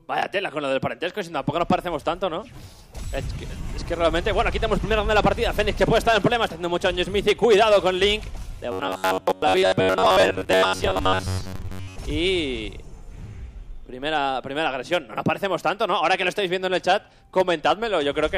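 Hard clipping runs throughout: peaks overdrive the signal by about 2 dB, so a small fraction of samples are cut flat, adding crackle on loud moments. From 8.72 to 11.98 s comes a robotic sound from repeated short buffers, a rigid metallic buzz at 93.8 Hz. The likely cause is about 10.7 ms of audio being replayed over most of that stretch while fresh audio is skipped.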